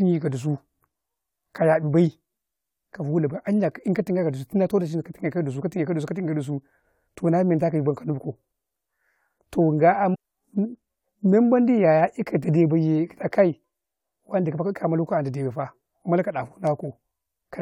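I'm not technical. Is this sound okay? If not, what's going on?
No. Around 10.14 to 10.16 seconds, the player most likely failed to load one piece of the incoming stream and moved on to the next, a fault called a stream segment skipped. You hear a brief blip as the speech suddenly jumps ahead.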